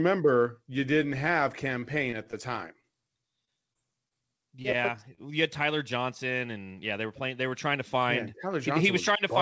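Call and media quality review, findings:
Repeated packet loss (robotic sound), 1.80–2.35 s, right after "you didn't have". Choppy texture. Four gaps, longest 25 ms, about 13% of the stretch concealed. Jitter buffer/decoder PLC extends the last waveform into each hole, and the next hole lands before recovery.

Repeated packet loss (robotic sound), 3.45–4.75 s. Seven gaps, longest 24 ms, about 8% concealed, roughly 80 ms of real audio gone. Same PLC extrapolation. Clipped fragments.

Short concealed packet loss, 2.81–2.85 s. Brief smear/wobble, about 20 ms of audio missing. Decoder PLC synthesised a continuation from the preceding pitch or noise shape, then cross-faded back into received audio. Isolated loss between the two robotic stretches, same network path.

Short stall from a late packet, 5.15–5.19 s. Sound held about 24 ms too long, slight buzz or dip. Jitter buffer underrun. Late packet, delay jumped about 24 ms. 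Receiver time-stretched the last frame, then resumed in place. Nothing lost. Band limit at 8 kHz fits the 64 kbps G.722 call path.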